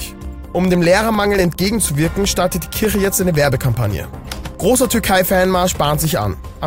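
From about 0.15 s to 6.55 s there are periodic USB or driver dropouts: every 0.1 s something stalls the audio path and roughly half a millisecond drops out to silence, giving a steady ten-per-second tick running through the sound.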